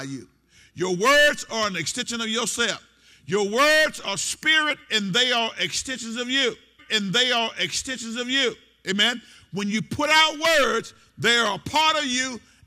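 At 6.78 s the audio jumps back and plays the same stretch again, about 2.0 s of material heard twice through 8.78 s, with a small blip at the jump. This is a stream segment repeated: the player fetched or queued one segment a second time.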